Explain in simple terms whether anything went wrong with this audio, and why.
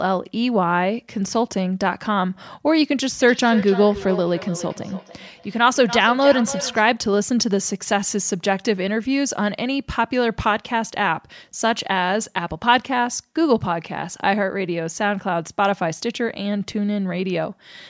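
Something did go wrong, from 3.21 to 6.89 seconds. That stretch has a feedback echo between two devices. Two devices in the same room were on one call. One played out what the other's microphone sent, and that microphone picked it up again. Each device's echo canceller only removes its own playback, so this sound slipped through. The speech comes back about every third of a second. The repeats are fairly strong, not faint.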